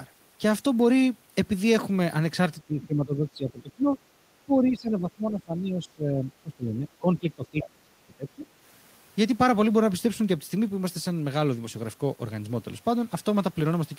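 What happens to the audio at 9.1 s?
Nothing goes wrong at 9.1 s; the speech carries on intact through that moment with no audible fault.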